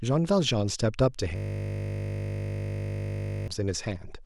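A system hang loop runs from 1.36 to 3.48 s: the stalled system lets the hardware replay one 20 ms buffer over a hundred times, producing a steady 50 Hz buzz.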